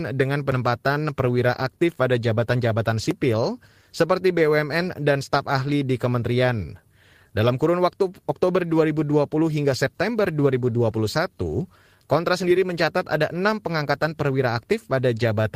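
It's a speech clip, and there's clock drift between sender and receiver: the sender's clock runs roughly 1.5% slow, so the receiver's buffer keeps draining and needs topping up. That shows up as repeated timing corrections from 0.28 s to 15.43 s, small repeated slivers adding up to roughly a third of a second, so it plays at about 98% speed with faint, unevenly spaced hiccups.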